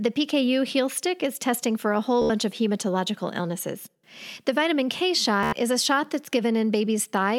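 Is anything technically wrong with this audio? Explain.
Yes, this speech has Bluetooth stutter twice, from 2.22 to 2.30 s and from 5.43 to 5.53 s. Late or lost wireless packets made the receiver replay its last short buffer, giving a rapid machine-gun buzz. This differs from a plain dropout, which goes silent, because a slice keeps repeating. Speech then resumes about 80 ms and 93 ms further on, skipping material rather than being delayed, which points to several packets lost in a row.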